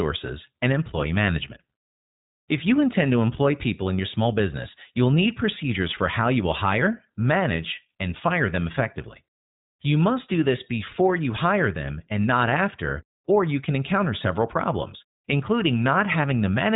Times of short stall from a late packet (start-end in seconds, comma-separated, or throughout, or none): none